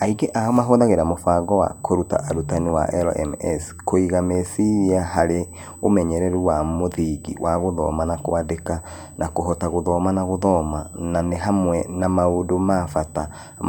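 A speech recording with USB whine running through its full length. A thin, steady tone sits at 8 kHz, roughly 25 dB below the speech. The whine comes from the USB bus's 125-microsecond microframes drawing current in bursts, which leaks into the audio through shared power or ground.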